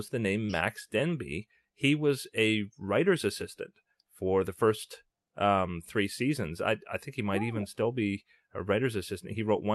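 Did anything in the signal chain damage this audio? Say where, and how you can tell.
Yes. Short concealed packet loss at 0.45 to 0.51 s, a network-stage fault: about 40 ms of the call reached the decoder too late, so the receiver continued the preceding sound and blended back into real audio, leaving a brief smear in the speech.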